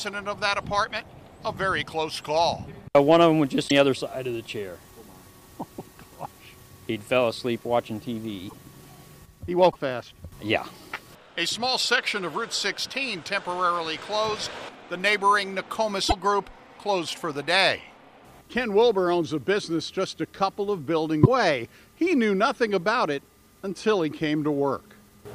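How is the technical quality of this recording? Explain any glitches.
The recording has five brief glitches of one kind. A broken MP3 bit reservoir is the likely cause, heard at 3.67, 8.48, 9.71, 16.08 and 21.23 s. Each is a 40 to 58 ms disruption, about two frames' worth, which fits 26.1 ms MP3 frames. After missing frames, the following frames fetch borrowed bits from the wrong data, so the sound skips ahead and briefly garbles.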